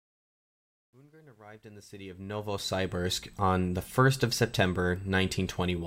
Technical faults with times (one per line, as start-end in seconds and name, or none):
0.00-3.01 truncation distortion on a fade